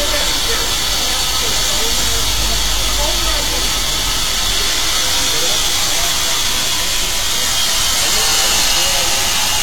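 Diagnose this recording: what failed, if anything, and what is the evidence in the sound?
The fault sits at the codec stage: compressed frames skipped. At 7.96 to 7.99 s the audio jumps forward, losing about 40 ms of material, so whatever was sounding continues from a slightly later point. Whole coded frames were either absent from the stream or rejected by the decoder as corrupt, and playback resumed at the next good frame.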